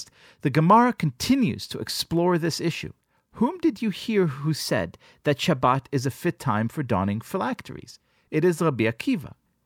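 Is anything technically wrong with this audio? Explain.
Yes. A drift correction step runs from 4.61 to 5.65 s, starting after "did you hear who" and ending before "is a fit time". Speed rises 5.3% and pitch about 89 cents, nearly a semitone, then both snap back, likely because clock-matching software jumped its playback rate to rebalance a buffer.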